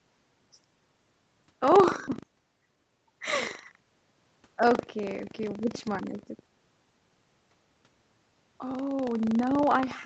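Buffer tearing runs through the whole recording. The software filling the playback ring buffer and the hardware draining it have drifted out of step, so their positions cross once per period. Each period therefore carries a short slice of stale audio, roughly 7 percent of it and around 70 ms old, spliced in with hard edges. The speech picks up a steady robotic rattle at 25 Hz, which points to a 40 ms buffer period. The rattle appears only while sound is present.

At 2.07 to 2.09 s there is a skip ahead. About 0.4 s of speech was discarded, most likely by the jitter buffer dumping its excess when it overflowed with later audio already queued. Nothing fills the hole. The material before and after is butted together almost directly, so playback lurches forward with a missing chunk and no audible pause. The receive delay drops by a similar amount at that moment.

From 2.17 to 3.06 s a jitter buffer speed-up follows. 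The buffer still held more audio than its target, so the receiver repeatedly cut out short pitch-period-sized pieces, roughly 150 ms in total, to bring latency down. Speech in that span plays at about 113 percent speed with unchanged pitch. It sounds rushed and clipped in rhythm, like a talker briefly hurrying, before normal pacing returns. The Opus call path limits the audio to 8 kHz throughout.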